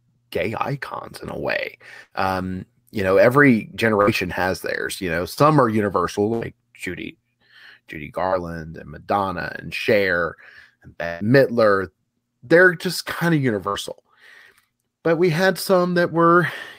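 The speech breaks up several times from lost packets. At 2.03 to 2.13 s there is a burst of packet loss. Packets stopped arriving in time, and about 80 ms of speech is missing. The receiver kept the last sound going and faded it, so it becomes a held buzz or a thinning hiss. Then the speech jumps ahead. The same happens at 4.01 to 4.09 s, with about 60 ms gone.

At 5.33 to 5.39 s comes a short concealed packet loss. Only about 40 ms failed to reach the decoder. The gap was patched by continuing the previous sound and blending back in. It sounds like a quick smear or wobble rather than a dropout.

Further bursts follow at 6.33 to 6.43 s, about 80 ms lost, and 11.06 to 11.22 s. That one is the longest, about 140 ms. The last is at 13.68 to 13.76 s, about 60 ms.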